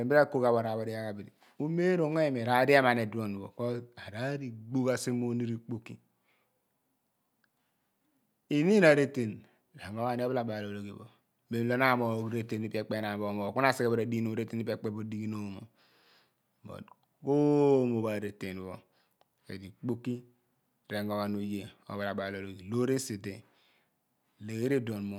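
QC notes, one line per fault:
No technical faults detected.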